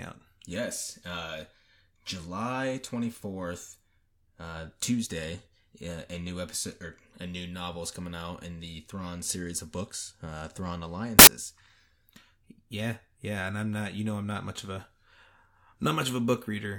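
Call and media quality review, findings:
Samples built from the wrong bytes, 11.19–11.27 s (about 80 ms): sudden burst of loud, harsh broadband noise in the speech. Probable component: PCM decode/reader stage misassembling each sample, off by a byte or with byte order swapped, so the fast-changing low bits land in the high part of every value. Check framing and endianness handling at that point.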